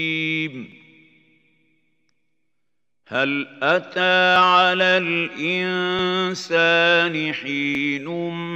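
At 0.72 and 3.15 s the sound jumps ahead by roughly 10 ms, then bigger skips of around 30 ms at 4.36, 5.99 and 7.75 s, with no gap of silence. That's likely a dropped buffer (overrun), where samples got overwritten before being read.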